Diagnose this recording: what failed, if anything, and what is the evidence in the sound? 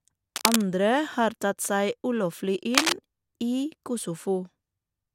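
Cable scratch noise, analogue wiring. Rustling bursts at 0.36–0.64 s, before "har tatt", and at 2.74–2.93 s, as loud as the speech or louder. Likely a worn contact shifting.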